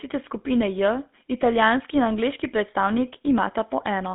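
Throughout, a GSM full-rate codec squeezes the speech through a 200 Hz to 3.6 kHz band with buzzy, gravelly pulse-driven roughness, unlike clean telephone band-limiting.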